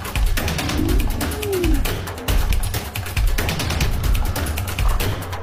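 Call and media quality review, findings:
Compressed frames skipped at 0.75, 2.47 and 3.81 s. Jumps of roughly 200, 200 and 100 ms. Decoder drops whole 46.4 ms frames.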